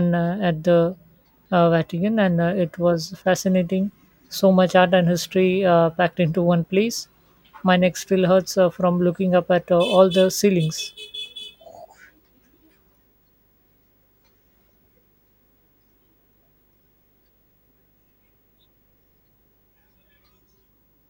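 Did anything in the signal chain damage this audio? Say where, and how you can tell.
Yes, analogue wiring: video or display buzz runs throughout the speech, a faint 50 Hz field-rate buzz plus a thin 15.6 kHz line tone, from a nearby screen or video cable coupling in.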